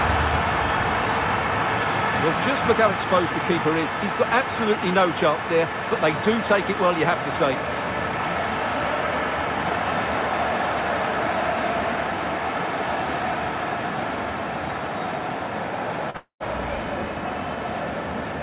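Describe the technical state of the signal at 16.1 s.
At 16.1 s a short concealed packet loss runs to 16.17 s: about 30 ms of audio arrived too late, and the receiver bridged it by extending the preceding sound for roughly 38 ms before blending back, leaving a brief smear in the band-limited, 4 kHz-ceiling G.711 signal.

From 16.17 s to 16.43 s the sound continues as a fading synthetic extension, then goes quiet for roughly the last tenth of a second before audio resumes. About 240 ms never plays, most likely a long network dropout that the receiver's concealment tried to cover.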